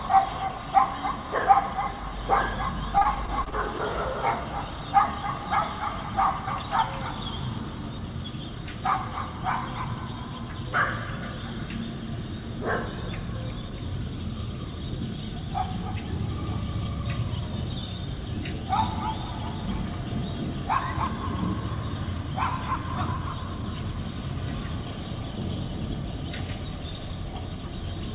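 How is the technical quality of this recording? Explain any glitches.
The recording has one glitch, and it sounds like a narrowband call, with nothing above 4 kHz, which fits G.711 at 64 kbps. From 2.98 to 3.81 s there's repeated packet loss with a robotic sound: seven short holes, the longest 30 ms, each patched by stretching the previous audio. Those patches make the passage choppy.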